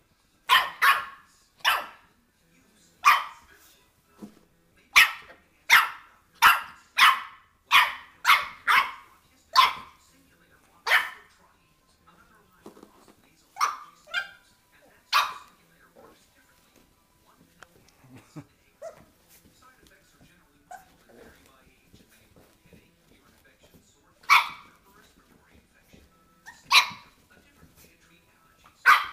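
No technical faults are audible.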